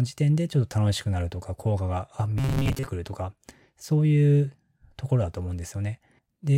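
From 2.38 to 2.87 s the speech becomes a rigid metallic buzz at 134 Hz, loosely following the words: robotic sound from repeated short buffers. Late audio was likely padded by looping about the last 7.5 ms, skipping most of the real signal.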